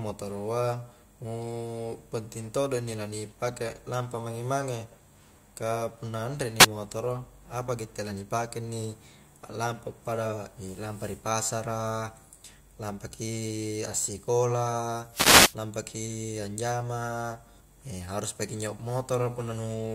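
Speech with two wireless microphone noise hits: a brief static swish at 6.58 to 6.67 s, just after "ka punna anre ni", and a longer burst at 15.12 to 15.55 s, just before "lampaki anjama". Both come from the FM radio link fading as reflections cancel, letting receiver noise rise over the voice.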